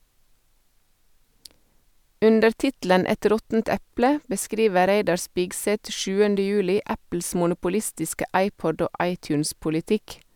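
No technical faults can be heard anywhere in this recording. The speech runs without any drop-out, glitch or break in the signal.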